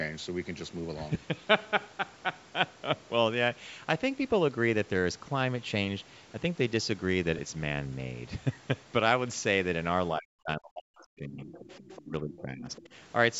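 At 1.14 s and again at 7.37 s the speech briefly smears into a grainy, noisy blur lasting about 7.5 ms and 15 ms. These are lost LE Audio frames: the LC3 decoder filled each gap by repeating the last spectrum with scrambled signs, and the lengths fit one and two 7.5 ms frames.

From 10.15 to 11.58 s the talker's speech sinks deeply, at its worst by roughly 40 dB. It dips again by about 20 dB from 12.04 to 12.68 s and briefly by about 10 dB at 12.87 to 12.93 s. This is speech suppressed in double talk, likely because the echo canceller turned everything down while both sides spoke.

A faint second voice also slips in, from 11.00 to 11.04 s about 30 dB below the speech, then from 11.52 to 12.02 s at about 20 dB down. It returns at 12.35 to 12.42 s and 12.76 to 12.89 s, around 25 dB down. These scraps are the other side's voice leaking through, likely the far-end loudspeaker audio that the echo canceller left in the microphone signal. 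Throughout, the band stops at 8 kHz, which fits the call's microphone processing.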